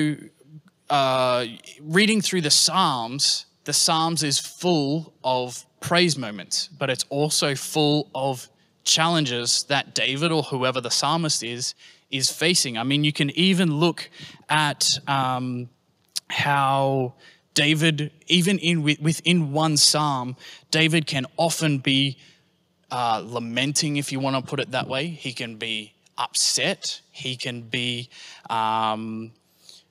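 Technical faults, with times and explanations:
Nothing stood out as a technical fault on listening to this speech recording.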